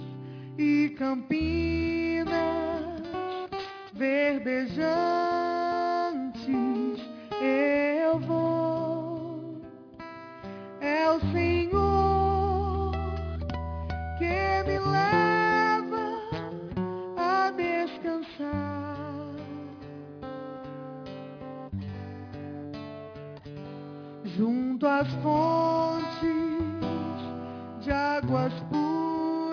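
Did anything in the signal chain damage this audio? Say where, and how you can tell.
Yes. Aliasing runs throughout, introduced at a sample-rate conversion stage. High content folds back around 5.5 kHz into unrelated, gritty tones roughly 25 dB below the signal, with the spectrum pressed hard against that edge. That fits an unfiltered drop from 48 kHz to 11 kHz.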